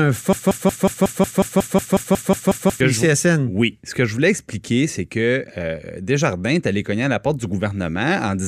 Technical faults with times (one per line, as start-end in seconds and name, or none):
0.33-2.80 broken-record loop